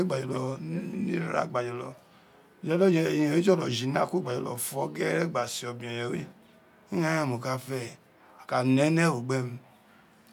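No technical faults can be heard anywhere in the recording; the signal stays steady and intact throughout, with nothing in it that points to a problem in capture, processing or playback.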